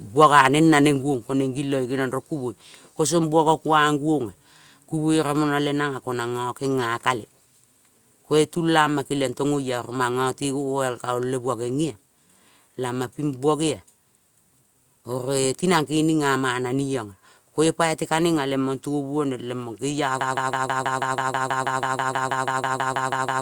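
A speech recording with three audible faults. From 0.22 to 0.47 s there is microphone overload: the loudest syllables crackle harshly because the peaks exceed the converter's limit by about 3 dB, likely from too much input gain, and flat-topped waveform peaks in under one percent of samples show the clipping, with smeared high-frequency energy on a spectrogram. At 1.02 s the microphone volume is stepped down by about 3 dB, likely the call software reacting to that overload. Voice and background drop together, seen as a sudden, permanent step in the waveform envelope. From 20.21 s to the end a broken-record loop takes over. A 0.16 s fragment repeats back to back about twenty times, likely because the stream stalled while resending its last buffer, and it shows as identical repeating blocks in both views while the intended audio is lost.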